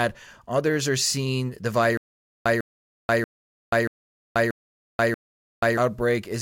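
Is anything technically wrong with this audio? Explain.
Yes. From 1.97 to 5.77 s a stutter with silent gaps replaces the speech: a 150 ms fragment repeats six times, each followed by about 484 ms of digital silence, every 634 ms. This is likely a stalled stream replaying its last buffer, so the intended audio is lost.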